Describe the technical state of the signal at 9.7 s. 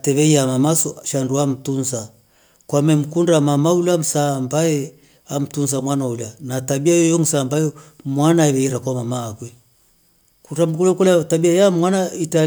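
At 9.7 s the speech signal is intact, with no audible dropout, distortion, clipping or other fault at that point.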